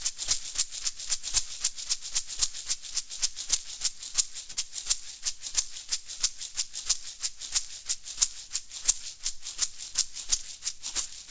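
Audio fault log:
4.52–4.59 s: short stall from a late packet. A packet arrived late, so the receiver held the last sound for 48 ms. Nothing is lost, but everything afterwards lands 48 ms later.
9.53–11.08 s: jitter buffer speed-up. To shrink a backlog, the receiver cut out short pitch-period pieces, about 70 ms in all. The sound runs at 104% speed with its pitch unchanged.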